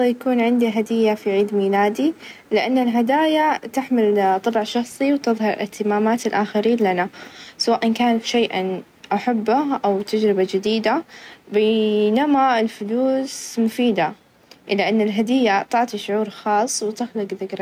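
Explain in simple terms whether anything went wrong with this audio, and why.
Gain pumping throughout: loud and soft parts end up closer in level and the speech sounds squashed, likely a limiter clamping down on mic gain set way too high.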